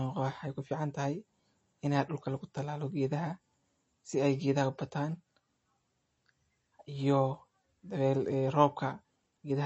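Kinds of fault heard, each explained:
MP3 compression: The speech has nothing above 8 kHz, and codec damage is plainly audible as a watery, swirling texture. The likely cause is MP3 encoding at a low bitrate, consistent with about 32 kbps. Starved of bits, the encoder removes the treble at a fixed cut-off and zeroes weak frequency lines frame by frame. On a spectrogram the energy stops at a flat ceiling at 8 kHz, with speckled gaps flickering below it.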